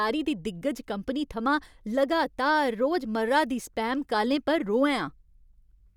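No technical faults can be heard in the speech. Nothing at any point in the recording stands out as a problem.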